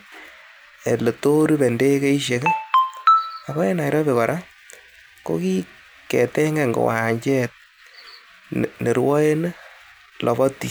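From 0.28 to 10.29 s, clicks land exactly every 2.0 s, likely clock drift buffer slips; random dropouts would not keep such even spacing.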